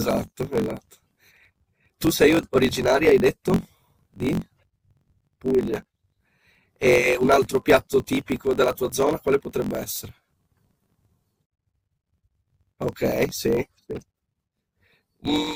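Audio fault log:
Throughout: block size mismatch (truncated). The speech carries a steady buzz at about 46.9 Hz, the rate at which blocks arrive. One stage hands over longer blocks than the next one takes in, so the tail of every block is dropped. Each cut leaves a small jump in the waveform, and those jumps repeat to form the buzz. The buzz rate fits a 1024-sample read block. The lost material makes the speech run 1.12 times fast, yet its pitch stays close to normal.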